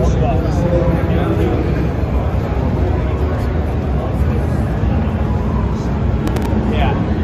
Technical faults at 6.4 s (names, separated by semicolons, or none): processor overload crackle